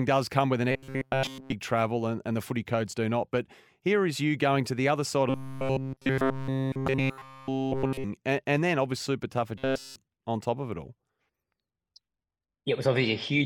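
From 0.71 to 1.52 s the speech turns into robotic sound from repeated short buffers: a rigid, metallic buzz at 133 Hz that only loosely tracks the speech. This is likely a starved playback buffer whose roughly 7.5 ms segments are replayed in place of fresh audio, with essentially all of the sound in that span replaced by repeats. The same buzz returns from 5.30 to 8.04 s, starting after "to the other side" and clearing before "and and then."

Inside that stretch, at 6.88 s, a short blip marks damaged data in a compressed stream. Corrupt bytes make the decoder misread a frame and resynchronise on the next header, leaving a brief glitch. A second glitch of this kind occurs at 9.01 s.

From 9.58 to 9.96 s the 133 Hz buffer buzz appears again, ending just before "on top of it." A final corrupted-frame glitch follows at 11.08 s, right after "top of it all."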